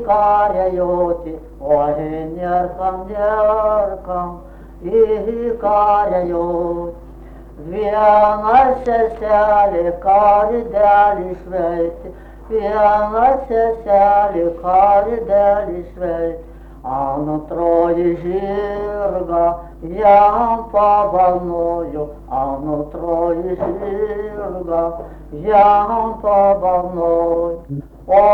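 No technical faults can be heard anywhere in the clip. Nothing in it calls for a timestamp or a second listen.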